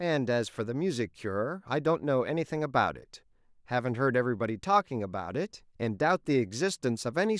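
No technical faults can be heard anywhere in this speech recording. There are no events to place on the timeline, so there are no times to mark.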